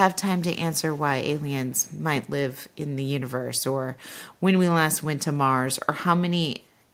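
Early on you get four bits of echo leak: 0.36 to 0.58 s, 0.74 to 1.05 s, 1.37 to 1.45 s and 1.66 to 1.96 s. Each is a faint copy of the speech trailing it by 272 ms, mostly about 35 dB down, a touch louder at about 30 dB in the second. The likely cause is a speakerphone at the far end whose echo canceller let some of its loudspeaker's pickup back into the return path.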